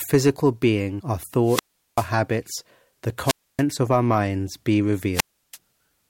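A speech clip with three wireless microphone squelch dropouts, at 1.43–2.11 s, 3.23–3.63 s and 5.12–5.58 s: each time the radio link fades, hiss rises briefly, then the receiver's squelch mutes the output for about 0.39 s, 0.28 s and 0.33 s. A waveform shows flat gaps, and a spectrogram shows broadband noise bands just before the empty holes.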